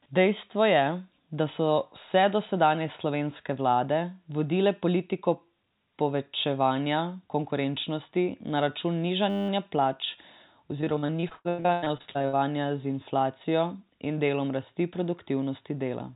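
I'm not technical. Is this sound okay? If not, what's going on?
No, there are two problems in this speech recording.

From 9.3 to 9.49 s there's a system hang loop. The computer briefly froze, and the sound hardware kept replaying the same tiny 10 ms slice of audio about 19 times. Because the slice is so short, it doesn't sound like a stutter. It comes out as a steady buzz with a pitch of about 100 Hz. Very little of the actual speech is lost here. It's just replaced by that buzz for a moment.

From 10.81 to 12.35 s you get repeated packet loss, which gives the robotic sound. Over twenty short dropouts hit that stretch, the longest about 98 ms. Each time, the system papers over the hole by stretching the last bit of sound it had, so almost half of that stretch is filler rather than real speech. That's why it sounds choppy, with bits of the speech missing. All of this is on top of the call line's usual muffled, phone-like tone, with nothing above 4 kHz.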